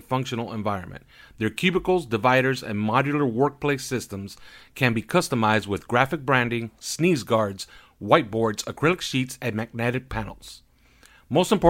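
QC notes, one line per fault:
No faults found on this speech clip; nothing to log.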